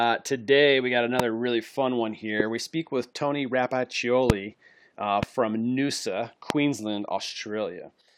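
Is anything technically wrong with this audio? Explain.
Yes. Five loud pops hit the speech: 1.20–1.22 s (after "today we got"), 2.40–2.42 s (after "really fun one"), 4.30–4.32 s, 5.23–5.25 s and 6.50–6.52 s. Each is a sharp thump, roughly 15 to 25 dB above the speech, which carries on underneath. The likely cause is a sudden voltage pulse from a switch, plug or static. On the waveform they show as tall, narrow spikes, and on a spectrogram as thin vertical lines across the full frequency range.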